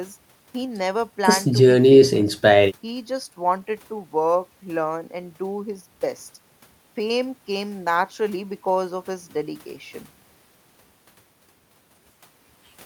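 No technical faults occur at any point in the speech, so there is nothing to place in time order.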